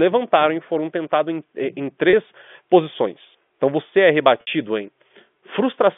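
Two packet losses with pitch repetition occur in this telephone-band speech, which passes through G.711 coding. At 2.10 to 2.13 s, just after "tentados em é em", about 30 ms of signal is missing. The receiver bridges the gap by repeating the last pitch period. The sound holds for an instant with a slight buzz. At 4.41 to 4.47 s, after "você é", a 60 ms gap is filled the same way. That length suggests two lost packets. The repeated cycle fades as it runs, then speech resumes.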